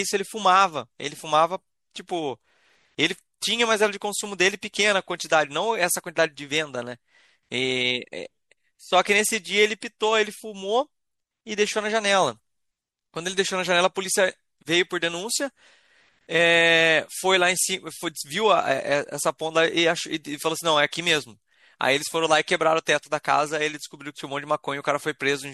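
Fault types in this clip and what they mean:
MP3 compression: Lossy coding that discards frequency detail it judges inaudible, here plainly audible throughout the speech and likely from a low bitrate around 64 kbps. A spectrogram shows a hard treble ceiling and flickering holes in the upper bands. Sibilants sound swirly and watery.
Corrupt frame decoded: A damaged compressed frame was played without concealment, scattering energy at wrong frequencies. At 22.56 to 22.59 s a brief glitch occurs, spanning about two frames and peaking near -30 dBFS. The spectrogram shows a short out-of-place burst.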